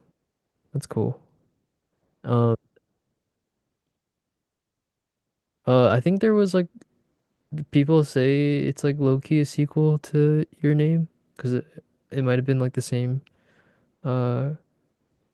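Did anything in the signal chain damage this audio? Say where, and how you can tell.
No, nothing in the signal chain audibly damaged this speech recording, and the signal stays intact and continuous at every stage.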